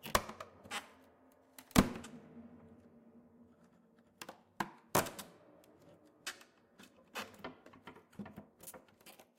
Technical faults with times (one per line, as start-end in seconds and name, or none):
none